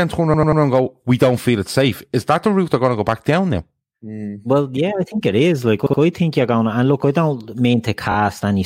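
Repeated frames cause three stutters. From 0.33 to 0.61 s, a 93 ms block plays three extra times, adding about 279 ms. From 5.85 to 5.99 s, a 70 ms block repeats twice more. From 8.11 to 8.15 s, a 23 ms slice repeats twice, which fits a single compressed frame. Unlike a dropout or a glitchy loop in playback, the audio replays identical material and grows longer instead of losing time.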